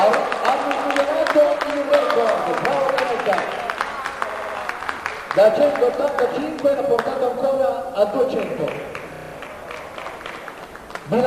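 Repeated frames produce two stutters in the audio. From 4.30 to 4.56 s, a 64 ms block plays four extra times, which fits two compressed frames being written or sent again, and adds 256 ms. From 9.14 to 9.33 s, a 32 ms block, likely a single frame, loops six extra times and adds 192 ms. The clip runs longer by the duplicated time.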